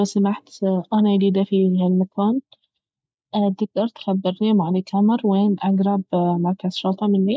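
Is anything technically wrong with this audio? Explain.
No, nothing is technically wrong with this audio.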